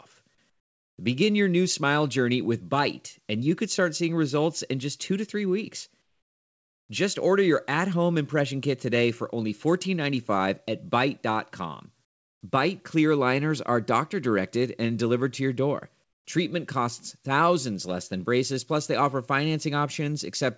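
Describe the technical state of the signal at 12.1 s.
At 12.1 s you're in a stretch of comfort noise in place of the background, running from 12.05 to 12.41 s. The real room sound drops out for 360 ms and gets replaced by a flat, featureless hiss about 25 dB quieter. That's likely discontinuous transmission: the sender paused during silence and the receiver filled the gap with synthetic noise.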